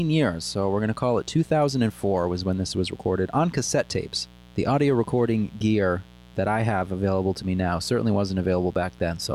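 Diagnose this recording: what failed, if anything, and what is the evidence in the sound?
The failure is in the analogue wiring: a mains buzz runs under the speech for the whole clip, from the first moment to the last, sitting roughly 25 dB below the speech level. Its raspy, steady character and its fundamental at 60 Hz point to sharp switching spikes from a dimmer, rectifier or unshielded cable coupling into the signal path twice per mains cycle, so the harmonics of 60 Hz extend well up into the kilohertz range.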